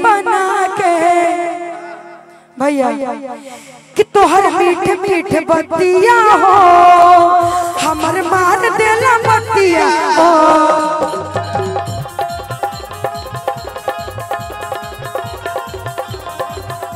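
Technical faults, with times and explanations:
3.02, 7.02, 11.03 and 15.04 s, overlapping chunks: every 4 seconds each new chunk starts about 7 ms before the previous one ended, so that sliver plays twice. The doubled bit lands as a click or stutter right at each join.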